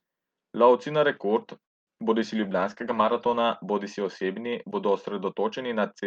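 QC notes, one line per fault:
1.65–1.89 s, call audio freeze: Just after "na rekord", packets were likely held up in transit and the jitter buffer ran dry. The last sound carries on only briefly before about 210 ms of silence, then speech resumes where it stopped, delayed by roughly 0.22 s with nothing lost.
1.95–1.98 s, short concealed packet loss: About 20 ms of the call, again shortly after "na rekord", never reached the decoder in time. The receiver patched roughly 10 ms by extending the preceding sound, then blended back into the real signal, leaving a brief smear or wobble.
2.34–3.52 s, call bitrate drop: After "na rekord", the bandwidth estimate collapsed and Opus was pushed from 40 kbps down to 14 kbps, staying at its lowest for about 1.1 s. Coarser coding makes the speech sound rough and watery, with duller highs, until the rate recovers.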